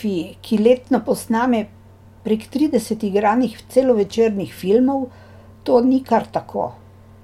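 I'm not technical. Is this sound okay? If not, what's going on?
Yes, it's okay: I hear no dropouts, clicks, distortion or glitches anywhere in the recording.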